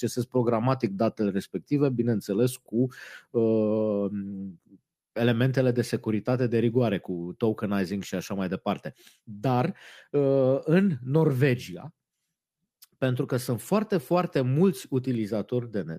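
Listening through the speech recording, nothing stood out as a technical problem at any point.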